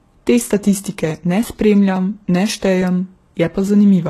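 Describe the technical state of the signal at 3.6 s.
Two independent clocks are drifting apart by roughly 700 ppm, likely forcing a buffer slip of a few dozen samples every 0.86 s across 0.25 to 3.68 s. At 3.6 s this is heard as a regular click, with the next one due at about 3.68 s. The audio was also likely passed through more than one lossy codec, which fits a low-rate HE-AAC stage followed by Vorbis. As a result, nothing remains above 12.3 kHz, and the different artefacts of both codecs sit together in the sound.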